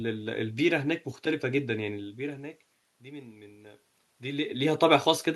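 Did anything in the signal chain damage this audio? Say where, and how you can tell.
Yes, in call processing: automatic gain rising from 1.84 s to 4.87 s. After the input falls by about 20 dB, the AGC slowly adds about 4 dB, so speech and room noise swell together. The waveform envelope and the noise floor climb steadily over those three seconds.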